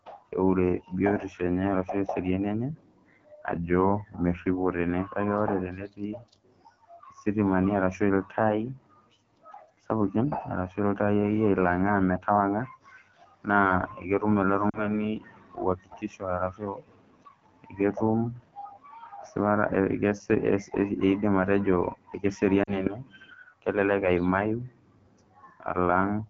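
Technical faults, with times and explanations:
Throughout: AMR wideband (HD Voice) codec. The speech has a rough, raspy edge. That fits one of the two lowest AMR-WB rates, likely 8.85 kbit/s, where the pulse-driven vocal tract model runs short of bits. The top band from 6.4 to 7 kHz is filled with shaped noise instead of real detail.
14.70–14.91 s and 22.64–22.91 s: lost AMR speech frames. Each gap sounds like about 40 ms of missing audio, consistent with two dropped frames. The decoder repeated the last good pitch and vocal tract settings at falling gain, so the sound drops to near silence within the two frames, then returns weak or rough.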